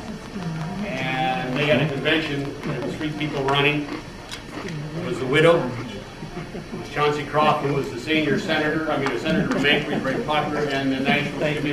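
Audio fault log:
0.08–3.94 s, train of clicks: a run of sharp, near-identical pulses at a steady rate of about 5.5 per second, some 20 in all, heard as regular ticking laid over the sound and continuing through quieter stretches. The clicks peak around 10 dB above the surrounding audio, so they stand out clearly. The even spacing and matching shape suggest a periodic external source, likely interference from nearby equipment or a faulty connection or power supply.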